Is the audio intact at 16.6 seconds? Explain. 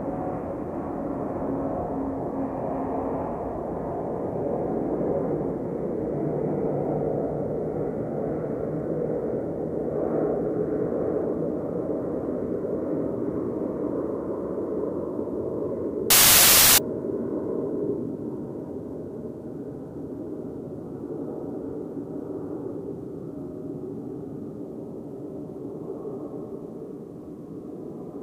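No. From 16.10 to 16.78 s the samples are built from the wrong bytes: the reader misassembles each sample's bytes, so the rapidly changing low bits become the bulk of each value. The sound is replaced by broadband noise for that span.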